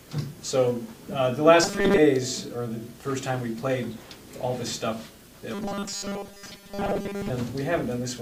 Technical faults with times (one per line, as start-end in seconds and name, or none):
1.64-1.98 robotic sound from repeated short buffers
5.54-7.30 robotic sound from repeated short buffers